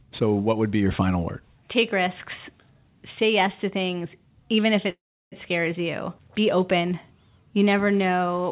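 At 4.9 s, after "to things even if", a call audio freeze stalls the speech for 0.44 s. A short fading buzz gives way to 0.34 s of silence, likely from delayed packets draining the jitter buffer. Speech resumes at 5.34 s with "scares you", delayed but intact. The band-limited sound, with nothing above 4 kHz, fits a G.711 call path.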